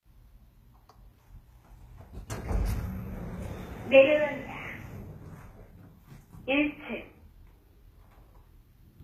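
A short recording of sounds, plainly damaged throughout by what is likely HE-AAC compression, with artefacts that fit a very low bitrate near 20 kbps. Its treble is synthesised by copying lower bands upward, so bright, noisy detail turns gritty and metallic, and harmonics fail to line up across the crossover. On a spectrogram, the upper band looks like a smeared repeat of the region below, ending at a hard ceiling of 14.9 kHz.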